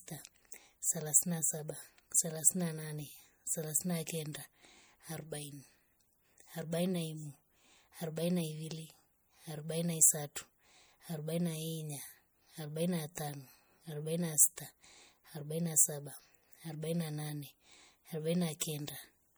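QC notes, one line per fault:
Throughout, MP3 compression: the speech has a plainly audible watery, swirling quality, with metallic chirps on sibilants and softened consonant attacks. This is likely MP3 encoding at a low bitrate, which fits roughly 64 kbps. With too few bits, the encoder drops weaker frequency lines, and they flicker in and out from frame to frame. Nothing is present above 21.1 kHz, so the watery sound comes from that flickering rather than from a low treble cut.
10.35 s and 18.6 s, pre-echo: just before two sharp attacks, a brief hiss arrives early and the attack itself sounds smeared. The early noise spreads over about 10 ms at 10.35 s and about 19 ms at 18.6 s. The transform codec spreads quantisation noise across a whole block. Because the attack falls late in its block, noise sized for the loud onset also fills the quiet moment before it.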